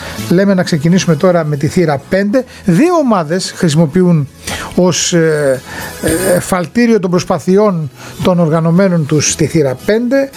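Gain pumping runs throughout the clip. The gain swings by around 25 dB, squashing loud and soft parts together. The likely cause is input gain set far too high, with a fast limiter clamping down.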